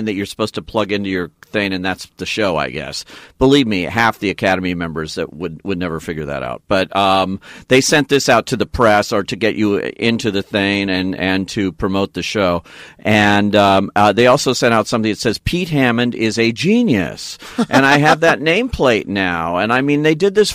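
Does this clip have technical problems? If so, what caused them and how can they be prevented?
Yes. Hard clipping runs throughout the speech: the signal was driven about 6 dB beyond what a stage could pass, so a small fraction of peaks are sliced flat, adding high harmonics heard as crackle on loud syllables. Set gain lower, leaving headroom before conversion.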